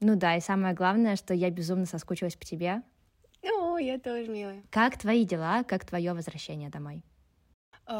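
No technical faults are audible anywhere in this recording.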